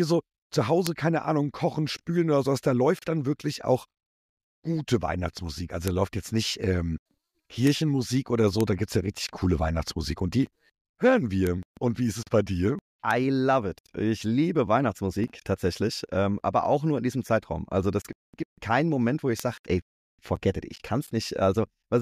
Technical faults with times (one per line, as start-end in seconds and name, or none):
0.87 bit error spike
5.88 bit error spike
7.67 bit error spike
8.61 bit error spike
11.47 bit error spike
13.11 bit error spike
19.40 bit error spike